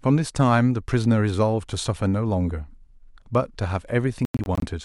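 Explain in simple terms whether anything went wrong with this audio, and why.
Near the end of the speech, between about 4.25 and 4.64 s, the sound keeps cutting out in short bursts of silence, which is most likely a Bluetooth dropout. Chunks of audio didn't reach the headphones in time and got thrown away, leaving gaps that add up to about 190 ms, the longest about 90 ms. After each gap the speech picks up further along, as if it had kept playing underneath.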